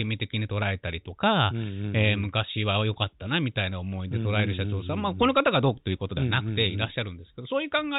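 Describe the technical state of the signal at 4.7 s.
At 4.7 s the speech is intact, with no dropout, distortion or other fault, and it carries the narrow, telephone-like sound of G.711 coding, which passes nothing above 4 kHz.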